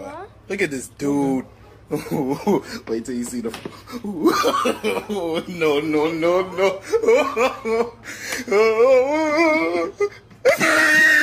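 No technical faults turn up anywhere in this clip.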